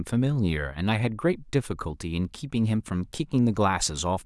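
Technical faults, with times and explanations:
No technical faults can be heard in this speech recording. There is nothing to time or explain.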